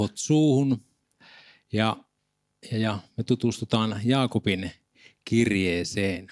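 No technical faults can be heard anywhere in the speech. There is nothing here that needs a time mark.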